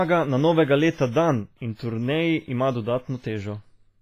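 Throughout the speech, likely WMA compression, sounding like roughly 24 kbps, smears quantisation noise across long blocks, leaving heavy ringing, washy hiss and nothing above 15.5 kHz.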